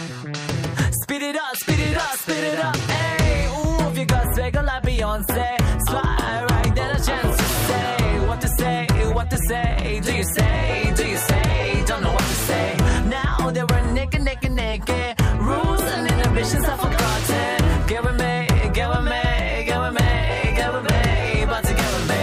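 Hard clipping runs throughout the clip: the signal is driven about 6 dB past what the stage can pass, so its peaks are sliced flat. Only a small share of samples, around one or two percent, exceed the limit, giving crackle and grit on the loudest moments.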